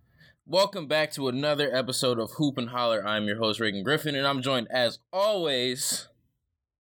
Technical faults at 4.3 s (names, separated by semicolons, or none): none